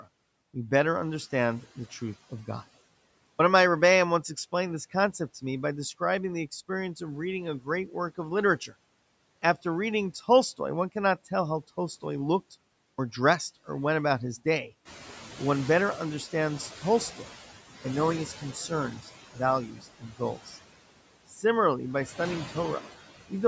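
A noise suppressor runs across the whole of this speech recording, pulling down the bands it judges to be steady noise by about 17 dB frame by frame. As a result, the background sinks in the gaps and swells back under the talker. The call's microphone processing leaves nothing above 8 kHz, which is its normal band limit. Twice the output path lets the device go idle during a short silence and loses the start of the next phrase while it wakes. After a 0.71 s pause, 3.34 to 3.39 s loses about 53 ms, so "of my" begins abruptly. After a 0.44 s pause, 17.79 to 17.84 s loses about 54 ms, and the sound again jumps in without its first sounds. When the room noise rises by about 11 dB at roughly 15 s, the suppressor's noise estimate lags. From 14.85 to 17.42 s, right after "went about his day", the noise is cut by only about 10 dB, so the louder background comes through with less reduction at first. 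It then settles lower as the estimate adapts over about 2.57 s, leaving it about 16 dB under the speech. The suppressor also mistakes parts of the speech for noise. Between 18.39 and 20.57 s, roughly 0.7 s in total is turned down by as much as about 17 dB, so parts of the speech sound swallowed or faint. At 21.30 to 21.44 s, a brief dip of about 9 dB, roughly a tenth of a second, dulls the sound just before "by studying".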